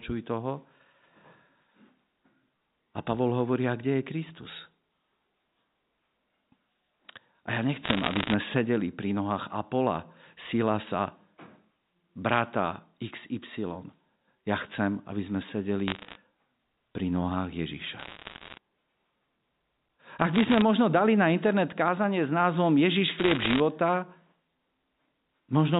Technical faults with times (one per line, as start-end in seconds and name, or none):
7.84-8.34 bit errors on a digital phone line
15.88-16.16 bit errors on a digital phone line
17.98-18.58 bit errors on a digital phone line
20.34-20.62 bit errors on a digital phone line
23.18-23.60 bit errors on a digital phone line